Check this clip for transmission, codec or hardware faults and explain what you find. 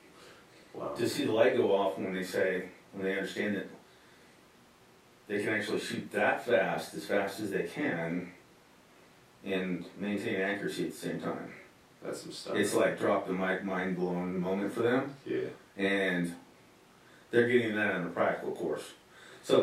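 Listening through this speech recording turns up no faults at all. Nothing anywhere in it points to trouble with how the audio was sent, encoded or captured.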